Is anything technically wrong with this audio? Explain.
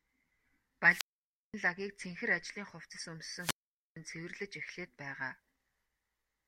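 Yes. The speech suffers two wireless microphone squelch dropouts. The first runs from 0.87 to 1.54 s, the second from 3.37 to 3.96 s. In each, the radio link from an analogue FM microphone weakens. The receiver's squelch then shuts its output rather than pass pure noise. You hear hiss climb briefly, then a gap of near silence. That mute lasts about 530 ms the first time and about 460 ms the second. Then the voice comes back.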